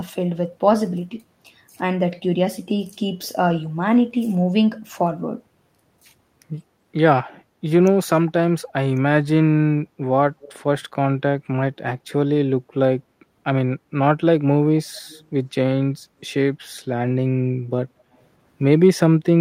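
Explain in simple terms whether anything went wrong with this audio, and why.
Around 7.19 to 7.33 s the room background briefly dips, which is background gated by the echo canceller: it clamped the microphone down while the loudspeaker played. At 10.41 to 10.53 s and again at 15.09 to 15.26 s there's a faint, quiet copy of the speech about a fifth of a second late, likely an echo leak where the far end's canceller let some loudspeaker sound slip back.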